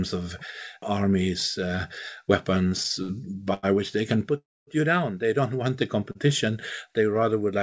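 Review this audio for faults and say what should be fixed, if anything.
Short stalls from late packets occur at 2.69–2.74 s, 3.02–3.12 s, 3.54–3.66 s (just before "which they can") and 6.12–6.18 s (after "want the"). In each one a packet arrived late, the jitter buffer emptied, and the last sound was stretched for 22, 64, 92 and 30 ms before resuming, so nothing is lost.

A call audio freeze runs from 4.38 to 4.70 s, between "which they can" and "you down". The sound is held briefly and then drops to silence for 250 ms of the 292 ms gap before resuming. The likely cause is packets delayed in transit, leaving the jitter buffer empty.

Both faults happen on the G.722 call path, which has nothing above 8 kHz throughout. They can be prevented by giving the jitter buffer more headroom and by reducing network delay variation, for example by prioritising the audio traffic.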